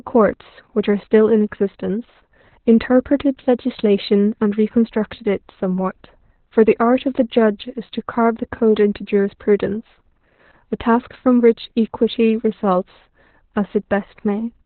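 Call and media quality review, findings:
Opus voice compression, whole clip: speech muffled, hoarse, a bit robotic, nothing above about 4.2 kHz. SILK-style narrowband coding with coarse excitation, heavy damage. Sounds like a very low bitrate, around 8 kbps. Worth bumping the encoder rate.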